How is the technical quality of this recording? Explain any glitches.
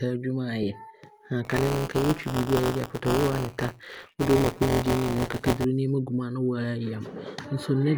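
The recording has two audible glitches in the speech, one brief and one sustained.

At 0.63 s there is a tiny smeared, slightly noisy blip. It comes from lost LE Audio frames: a single 7.5 ms frame went missing over Bluetooth, and the LC3 decoder filled the gap by reusing the previous spectrum with randomised signs.

From 1.45 s to 5.65 s the speech carries a steady robotic buzz at 172 Hz, which fits a 256-sample buffer. This is buffer tearing. Writer and reader of the playback ring buffer have drifted, so about a tenth of each period replays audio from roughly 20 ms earlier, with hard joins either side.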